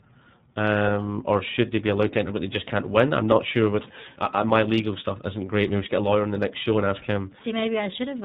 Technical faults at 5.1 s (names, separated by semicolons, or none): iLBC codec